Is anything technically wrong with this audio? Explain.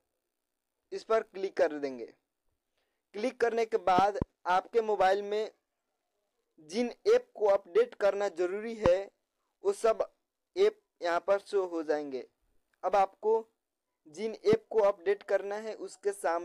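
Yes. Loud pops land at 3.99–4.24 s (a pair), 8.86 s and 14.53 s, peaking about 15–20 dB above the sound. They are likely voltage spikes from a plug, switch or static. The audio continues beneath them rather than cutting out.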